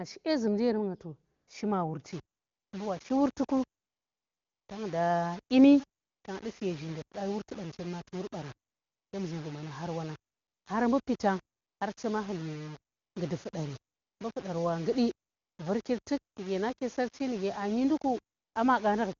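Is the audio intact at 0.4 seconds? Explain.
Yes, at 0.4 seconds the speech is intact, with no fault present at that moment.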